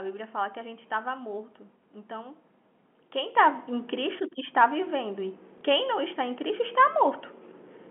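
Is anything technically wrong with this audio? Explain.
Yes, there are two faults in this telephone-band speech, which is limited to roughly 200 Hz to 3.4 kHz by its G.711 coding.

Sudden gain jump, at 3.36 s and lasting to the end. The level steps up by about 7 dB between one sample and the next, with no fade, and the background noise rises with the speech. This is likely a digital gain setting or bit shift applied instantly instead of being ramped, so the change lands as an abrupt lift that can carry a click at the join.

Packet loss with last packet repeated, from 5.58 to 5.61 s. About 30 ms of audio is missing, which fits a single lost packet, and the receiver fills the gap by replaying the preceding chunk, so the passage comes out as a small blip.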